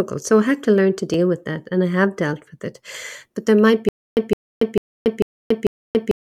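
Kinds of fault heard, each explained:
Stutter with silent gaps: from about 3.89 s to the end, the speech stops moving forward and a burst about 163 ms long plays over and over, five times, each followed by about 282 ms of dead digital silence, so it returns every 445 ms. The likely cause is a stalled player or stream replaying its last fragment at each retry and then running empty. Unlike a plain dropout, the same fragment returns at an even pace, and the audio that should have followed is lost.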